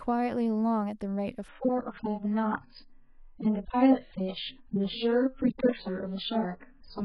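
At 1.48 s the speech drops abruptly into a degraded version that lasts to the end: an adaptive stream at a lower bitrate. The connection evidently slowed, so the player switched to a much leaner encoding, and the sound now stops dead at about 5.1 kHz with swirly, watery codec artefacts. That points to a fall from a fairly generous AAC stream to one of only a few kbit/s. Unlike a dropout or packet-loss concealment, the switch leaves no gap or glitch, just a sudden, lasting change in quality.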